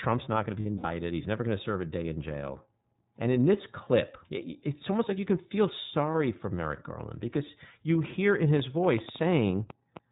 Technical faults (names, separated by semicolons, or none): iLBC codec; lost iLBC frames; train of clicks